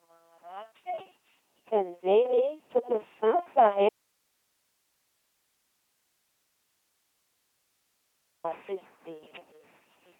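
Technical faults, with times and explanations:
Throughout, LPC-10 vocoder: the speech comes out as a buzzy, mechanical robot voice, squeezed to 2.4 kbit/s with nothing above 3.8 kHz, and buzz or hiss appears wherever voiced and unvoiced get swapped.
3.89 to 8.44 s, audio dropout to a faint residue: the speech cuts out abruptly for about 4.55 s, leaving only hiss far below the signal. The likely cause is the source dropping while the path after it stayed live.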